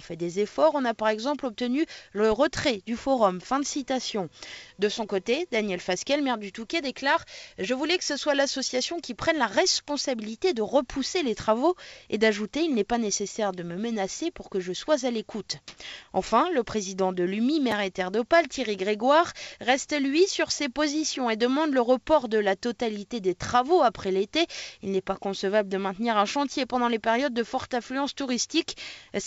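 This audio came over a call link whose top end stops at 8 kHz, which points to a wideband codec like G.722. At 15.68 to 15.77 s, for about 90 ms, the real background, sitting about 40 dB below the loud parts, drops out and is replaced by a flat, featureless hiss that's about 17 dB off in level. That's likely comfort noise in place of the background, where the sender's silence detection paused transmission and the receiver filled the gap with synthetic noise. Then at 17.71 s there's a brief jumbled moment: chunks out of order, with one roughly 5.8 ms chunk playing one slot late. Nothing goes missing there, but the swapped order leaves hard joins you can hear as a tiny garble.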